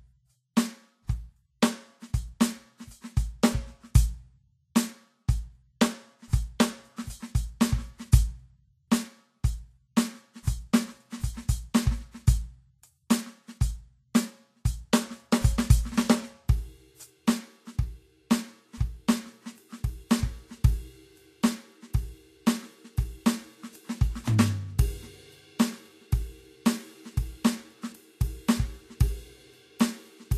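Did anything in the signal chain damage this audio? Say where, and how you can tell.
Yes, at the codec stage. Throughout the music there is nothing above 14.2 kHz, and the treble that remains is plainly hissy and grainy, with tones roughened rather than simply dulled. That points to lossy coding, likely Vorbis at a low setting that fits roughly 31 kbps. The encoder drops the top band and quantises the remaining treble so coarsely that detail turns into noise. A plain low-pass filter would remove the highs cleanly and leave no grain.

The same codec causes a pre-echo at 10.43 to 10.47 s. A short hiss spreads about 40 ms ahead of a sharp attack, and the attack itself sounds softened. The transform block containing the attack spreads its quantisation noise, sized for the loud onset, across the quiet moment before it. Reverb or an echo would trail after the hit. This noise arrives before it.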